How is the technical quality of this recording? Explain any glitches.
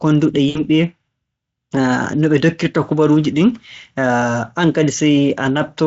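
One glitch, right near the start: VoIP packet loss concealed by the speech codec, from about 0.49 to 0.61 s. Roughly 60 ms of speech went missing, which fits three dropped 20 ms frames. The decoder filled the gap by stretching its last pitch and filter with falling gain, so you hear a brief smear that fades. It stays a bit thin just after, because each frame builds on the one before. The Speex coding sounds like a fairly high-quality setting.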